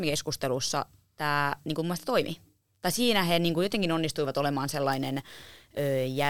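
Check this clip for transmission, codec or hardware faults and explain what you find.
There's one hardware fault: sample clock jitter, from 4.92 s through to the end of the clip. The converter's clock wobbles by something like 10 microseconds, so each sample lands a touch early or late, and the error it creates scales with how fast the waveform is changing. Here that error sits roughly 20 dB under the speech, so you get a gritty hiss that rides on the louder, brighter parts and drops away in the gaps.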